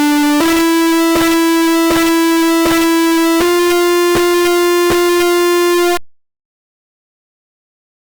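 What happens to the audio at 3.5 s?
At 3.5 s, as throughout the clip, 32-bit integer samples are being read as 32-bit float (an integer read as float fault), so the output slams between silence and clipping as a harsh, extremely loud buzzing square wave.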